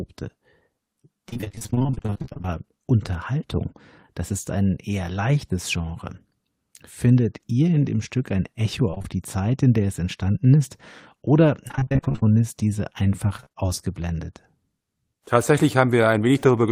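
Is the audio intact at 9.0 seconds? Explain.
No: repeated packet loss (robotic sound) runs from 8.91 to 9.06 s, where four short gaps, each about 20 ms at most, are patched by continuing the previous sound, leaving it choppy.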